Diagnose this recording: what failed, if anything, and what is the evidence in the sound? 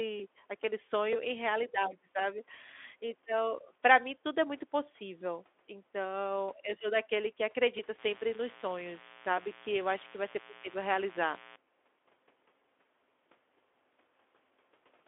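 Analogue wiring let switching spikes in as mains buzz: from 7.99 to 11.56 s, a raspy 60 Hz harmonic buzz sits about 20 dB below the speech.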